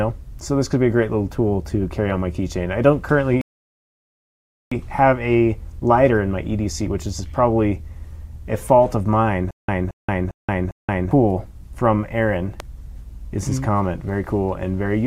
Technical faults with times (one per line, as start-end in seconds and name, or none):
3.41-4.72 rebuffering stall
9.51-11.11 stutter with silent gaps
12.60-12.62 loud pop